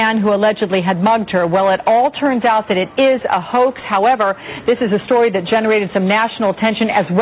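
No technical faults can be heard in this audio; it carries the band-limited sound of a call path, with nothing above 4 kHz, which fits a G.711 A-law codec at 64 kbps.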